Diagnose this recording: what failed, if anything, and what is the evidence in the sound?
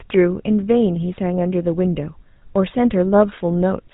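The speech passed through a GSM full-rate codec, and the damage is plainly audible across the whole clip. The coder models the vocal tract and rebuilds the excitation from a sparse, regularly spaced pulse train, so the voiced sound comes back with a buzzy, gravelly grain. Nothing survives above 3.8 kHz, leaving the sound dull and band-limited. The character fits the original 13 kbps full-rate GSM coder.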